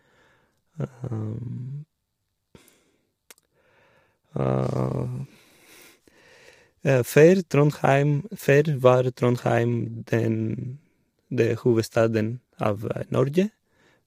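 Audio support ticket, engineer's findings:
Low-delay AAC compression, throughout the speech. Voice rough and grainy, noise filling gaps between harmonics. Likely AAC-ELD: short frames resolve pitch poorly, and the damage fits a bitrate around 32 kbps.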